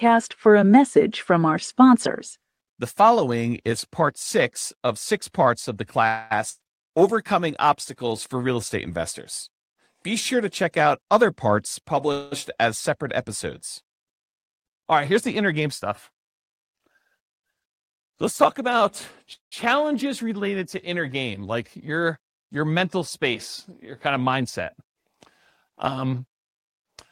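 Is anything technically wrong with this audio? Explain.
Yes, this speech clip has a few network-style glitches, all clustered around typical call jitter behaviour.

Call audio freezes hit at 6.07 to 6.36 s, 12.12 to 12.34 s and 19.34 to 19.54 s. Each one is likely packets stalling until the jitter buffer ran dry. The receiver stretches the last sound into a fading buzz or hiss for about 230, 200 and 180 ms. In the third freeze it dies away to silence for roughly 130 ms. Then the speech carries on exactly where it left off, just later.

There's also a burst of packet loss at 6.50 to 6.62 s, right after the first freeze. Here about 100 ms of audio simply never made it. The receiver papered over the hole with roughly 100 ms of the previous sound, held and faded into a buzz or hiss. When it picks back up, the speech has jumped ahead and that chunk is gone.

Finally, there are jitter buffer speed-ups at 11.08 to 11.95 s, 15.09 to 17.15 s and 25.83 to 26.99 s. 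The buffer had built up extra delay, so the receiver trimmed lots of tiny pitch-period slices to catch up. Playback runs at about 104%, 106% and 107% respectively, shaving roughly 40 ms, 100 ms and 100 ms. The pitch stays put, but the last two stretches sound a bit rushed.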